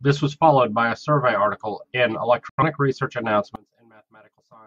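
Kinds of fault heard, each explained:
Digital broadcast dropout: The receiver muted when frames failed to decode. Just after "a survey article in", the speech cuts through a fade of about 3 ms at 2.49 s and stays silent until 2.63 s. Roughly 85 ms of programme is lost, which fits two dropped frames.
One channel inverted: From 3.56 s to the end, the speech falls by about 29 dB and turns faint. This is likely reversed polarity on one stereo channel. Summing to mono cancels the shared centre content and leaves only the small difference between channels.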